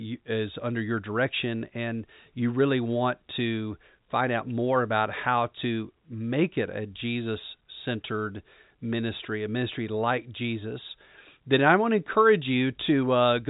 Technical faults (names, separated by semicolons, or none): none